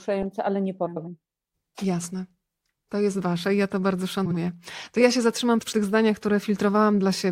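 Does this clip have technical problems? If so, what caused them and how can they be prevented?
Yes. Frames out of order: adjacent runs of frames were decoded swapped, so the speech at 0.86–1.08 s (about 105 ms halves) and at 4.25–4.37 s and 5.61–5.73 s (about 52 ms halves) flutters. Prevent this by reordering frames by sequence number in a jitter buffer before decoding.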